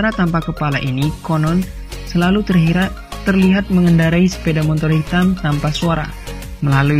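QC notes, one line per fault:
2.94 to 6.99 s, adaptive stream at a lower bitrate: at 2.94 s the quality drops abruptly, with no gap in the audio, and stays degraded to the end. Codec artefacts rise and nothing remains above 14.9 kHz. This sounds like the player falling back to a lower-bitrate version when the connection slowed. The change points to a switch from AAC-LC near 96 kbit/s to HE-AAC around 20 kbit/s.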